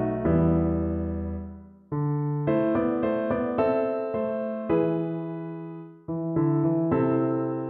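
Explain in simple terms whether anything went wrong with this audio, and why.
Nothing went wrong with this recording that a careful listener could pick out. The sound carries on steadily from beginning to end, with nothing unexpected breaking in.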